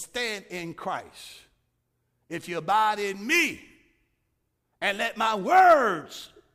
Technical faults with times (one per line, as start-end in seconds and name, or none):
none